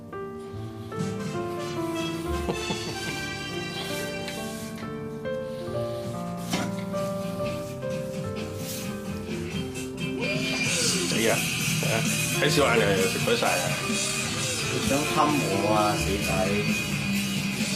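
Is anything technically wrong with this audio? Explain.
Yes. From 12.55 s to the end, an adaptive stream at a lower bitrate takes over: the slowed connection forced a switch to a much leaner encoding. Quality drops abruptly without any gap, treble vanishes above 14.9 kHz, and the thinner, synthetic top end fits a low-rate HE-AAC stream.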